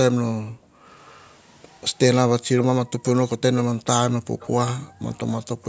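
From 0.41 to 0.87 s the room sound drops away hard, about 40 dB down, and comes back afterwards. That's background gated by the echo canceller: it clamps the mic while the far end plays. The same gating hits again at 4.25–4.36 s and 4.83–5.05 s. Between those, faint delayed copies of the speech creep in at 1.0–1.38, 2.14, 2.6, 3.03 and 4.4–4.48 s, lagging by about 200 ms and sitting well below the main speech. That's likely echo leak, where the canceller let some loudspeaker pickup through.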